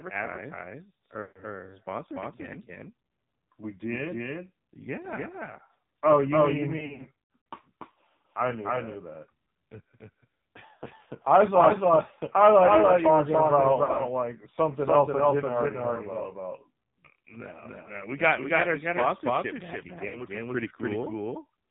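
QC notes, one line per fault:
throughout, doubled audio track: likely a second, slower capture path mixes in an equally loud, dry copy about 0.3 s late, so the sound constantly echoes itself.
throughout, AMR narrowband mobile codec: a heavily squeezed AMR-NB stream, consistent with a mode near 5.9 kbps, cuts everything above 4 kHz and leaves the speech buzzy and synthetic.
1.22–1.43 s, lost AMR speech frames: about 140 ms of failed frames are concealed by repeating the last settings at falling gain, so the sound smears and fades before "sponsored again".
6.78–7.43 s, lost AMR speech frames: failures scattered over about 0.68 s, runs up to 100 ms, cause repeated dips, warbles and drawn-out fragments as concealment keeps kicking in.
13.84–14.03 s, lost AMR speech frames: short runs of failed frames, none over 40 ms, between "you were talking about" and "something else I didn't" cause brief warbly dropouts.
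20.08–20.25 s, lost AMR speech frames: about 60 ms of missing frames after "got our sponsorship back" are bridged by decaying repeats, giving a quick dip and rough recovery.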